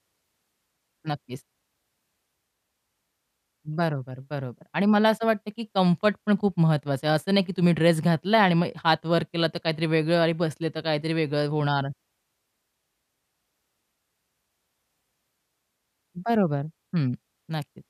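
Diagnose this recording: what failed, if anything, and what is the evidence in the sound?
A brief burst of burbling at 5.60 s is DAB burbling, a codec-stage failure on the broadcast path. Weak reception lets bit errors, at a rate of around a tenth of a percent, slip past the error correction into the MP2 audio data. Corrupted samples and scale factors then throw single sub-bands off for up to a frame, and the disturbance suggests about six frames were hit.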